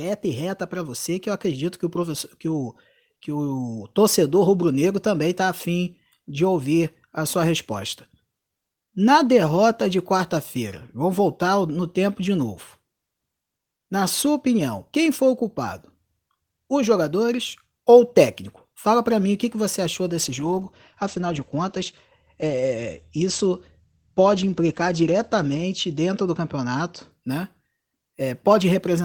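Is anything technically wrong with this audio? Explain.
Yes. From 20.23 to 27.17 s there is a call bitrate drop. The encoder was forced to spend far fewer bits, consistent with a fall from 32 to 12 kbps, so the speech turns rough and watery, and the audio bandwidth narrows from 20 kHz to 8 kHz for about 5.4 s. Unlike packet loss, nothing drops out; the degradation is continuous.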